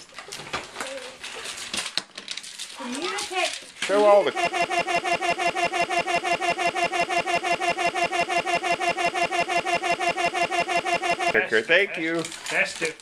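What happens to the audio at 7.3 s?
A broken-record loop spans 4.47 to 11.34 s: a 0.17 s fragment repeats back to back, likely from a stalled stream, tiling identical spectrogram blocks.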